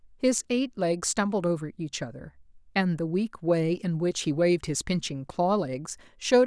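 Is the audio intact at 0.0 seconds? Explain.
Yes, the audio is intact at 0.0 seconds, with no fault heard at that moment.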